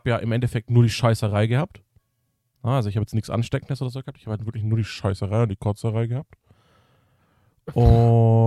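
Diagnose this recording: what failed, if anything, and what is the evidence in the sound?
From 4.81 s to 6.54 s the speech plays 5.9 percent slow and 105 cents flat, then snaps back. This is likely a drift correction step at the driver or buffer stage: clock-matching software briefly lowered the playback rate to refill its buffer.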